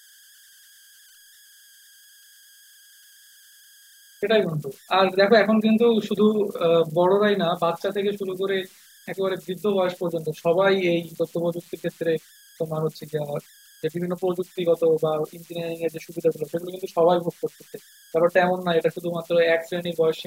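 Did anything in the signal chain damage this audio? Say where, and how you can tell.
Yes, at the converter: converter idle tones. An undithered delta-sigma stage turns small inputs into a faint whistle around 1.5 kHz, about 30 dB down throughout, seen as a thin horizontal spectrogram line.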